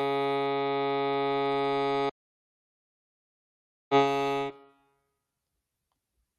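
At 2.10 s the music drops out to silence and stays gone until 3.91 s, about 1.8 s with no room tone at all. It likely came from the input being lost for a moment, a loose connection or stray mute, while recording carried on.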